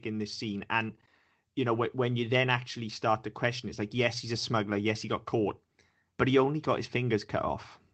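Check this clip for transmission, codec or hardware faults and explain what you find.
The speech carries the ordinary coding character of an Opus call path, with a top end that stops at around 12 kHz, and nothing in the signal departs from what that path normally produces.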